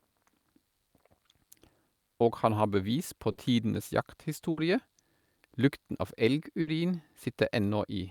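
Bursts of packet loss hit the speech at 3.31 to 3.40, 4.51 to 4.60 and 6.61 to 6.70 s. Each gap is concealed for 60 ms with a fading continuation, then resumes 60 ms further on.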